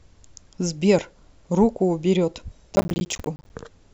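A burst of gritty crackle tears through the speech from 2.76 to 3.5 s, a rapid string of tiny hard-edged dropouts that chops the sound into fragments before it clears. This is processor overload crackle. The processor fell behind and missed a long run of buffer deadlines, around thirty of them, each leaving a short gap of silence. The length of each gap suggests buffers of roughly 10 ms.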